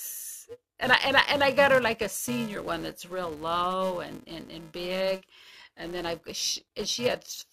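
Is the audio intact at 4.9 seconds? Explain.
No, at 4.9 seconds, as everywhere else in this speech, the filter restarts on every block, so each block opens with a tiny transient. That gives a 375 Hz buzz tracking the level, which fits 128-sample blocks.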